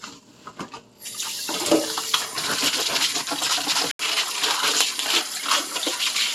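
At 3.91 s the sound drops out for about 80 ms. When it returns, the top end is gone. Nothing reaches above 13 kHz, so the sound turns duller and boxier until the end of the clip. A faint new background noise also appears, about 55 dB below the sound. The level stays about the same. This is likely an input switched to a poorer device, with the recording moving to a narrower-band device mid-take.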